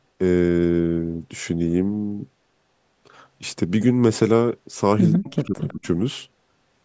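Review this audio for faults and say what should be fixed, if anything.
From 5.15 to 5.87 s the speech dips and breaks up, dropping around 40 dB at worst. This is likely speech suppressed in double talk. The echo canceller mistook the talker for loudspeaker echo and turned both down. Better double-talk detection would prevent it.

From 5.61 to 5.73 s a faint copy of the speech returns, 149 ms late and about 25 dB down. This is likely an echo leak. One side's echo canceller let loudspeaker sound through its microphone. Stronger echo cancellation or a headset would prevent it.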